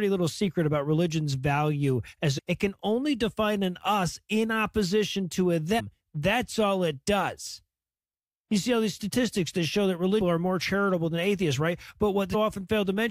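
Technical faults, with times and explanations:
2.37–2.39 s, 5.78–5.81 s, 10.20 s and 12.33 s: damaged data in a compressed stream. Each is a short glitch, lasting only about 15 to 25 ms, that breaks abruptly into the sound and then clears. Bytes in the compressed stream at these points are wrong, lost or overwritten. The decoder misreads the affected frame, briefly outputting garbage, then loses sync and hunts for the next valid frame header before normal decoding resumes.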